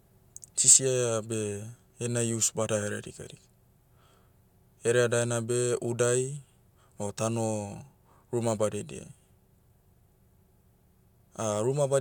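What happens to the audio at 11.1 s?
Nothing goes wrong at 11.1 s; the speech continues intact through that moment, with no dropout, click, distortion or other audible fault.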